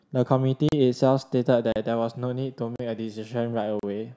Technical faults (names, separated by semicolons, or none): gap between chunks